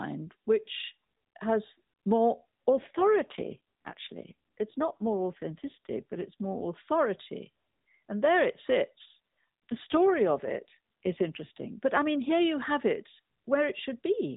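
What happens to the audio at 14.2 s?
Nothing goes wrong at 14.2 s: the speech carries on intact through that moment, with only the narrowband, telephone-like sound of the AMR mobile codec that runs through the clip.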